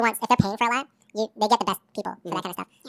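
From start to finish the speech plays at the wrong sample rate. It runs at twice its proper speed and a full octave high, 12 semitones up. Voices sound squeaky and rushed. That fits 16 kHz audio played back at 32 kHz without conversion.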